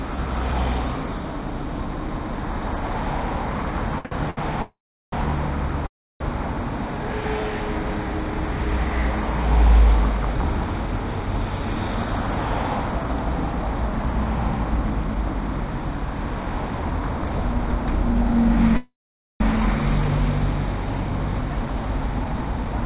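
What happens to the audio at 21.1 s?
At 21.09 s a jitter buffer speed-up kicks in and runs to 22.82 s. The buffer had built up more audio than it wanted, so the receiver kept snipping out pitch-period-sized slices, about 150 ms in total. The sound plays at 108% speed with unchanged pitch and comes across hurried.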